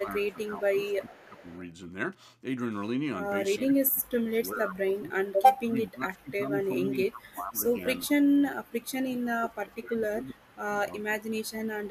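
Speech suppressed in double talk affects this speech recording at 0.0–1.5 s, 3.57–7.84 s, 8.05–10.69 s, 11.06–11.24 s and 11.41 s to the end. The voice dips and drops out in pieces, about 10 dB down in the opening stretch, as much as about 25 dB through the long middle passages, and about 20 dB in the two short final cuts. This is likely an echo canceller hearing both parties talking at once, failing to separate the near talker from loudspeaker echo, and ducking everything together. Echo leak appears at 0.89–1.6 s as a faint copy of the voice trailing 386 ms behind, sitting roughly 30 dB below the speech. It points to a loudspeaker-side canceller leaving part of what its microphone captured and sending that residue back down the line.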